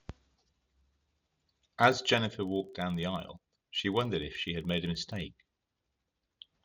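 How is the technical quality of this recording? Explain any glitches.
Not great: there's a steady tick running under the speech the whole way through. It's a filter restarted on every block. The filter loses its memory at each block boundary and starts again from silence, so every block opens with a small transient. Those land about 23.4 times a second, which fits a 2048-sample block, and they blur into a low, rough buzz that gets louder when the speech does and fades in the quieter gaps.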